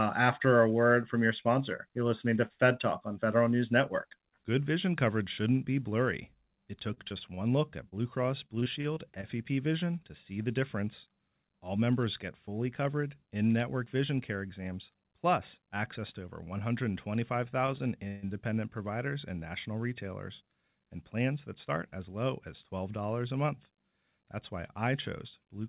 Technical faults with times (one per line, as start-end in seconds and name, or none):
6.94-9.25 repeated packet loss (robotic sound)
17.67-17.70 short stall from a late packet
18.07-18.24 call audio freeze
20.41-20.64 jitter buffer speed-up